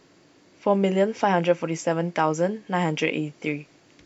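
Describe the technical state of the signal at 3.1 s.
At 3.1 s the speech signal is intact, with no technical fault present.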